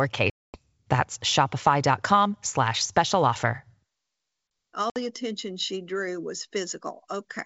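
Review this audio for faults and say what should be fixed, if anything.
Packet loss on an ADPCM call drops two chunks to hard silence, about 240 ms at 0.30–0.58 s and 60 ms at 4.90–4.99 s. The decoder's predictor and step size are then out of step with the sender's, so speech returns slightly distorted. Adding packet-loss concealment and faster predictor resynchronisation would fix it.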